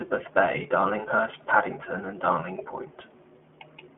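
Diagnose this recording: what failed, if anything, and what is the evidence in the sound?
The iLBC codec affects the whole clip, from start to finish, at the codec stage. The speech is confined to a telephone band of roughly 200 Hz to 3.4 kHz, with nothing above 4 kHz, and carries a plainly audible rough, synthetic texture, which fits iLBC's 15.2 kbps mode. The roughness comes from coding each 20 ms frame's excitation independently of the previous frame, so fine detail is approximated frame by frame rather than carried smoothly across.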